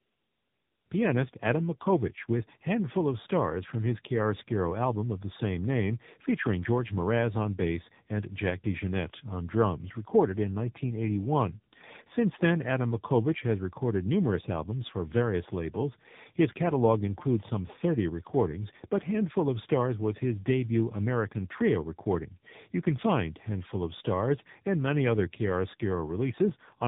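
Tandem speech coding runs throughout the recording: the speech was squeezed through a low-rate mobile codec, passed across a telephone link, then coded again, so the second coder reworked the first one's damage. The result sounds rough, muffled and warbly, with nothing above 3.8 kHz, which fits two AMR-NB stages at roughly 8 and 10 kbit/s.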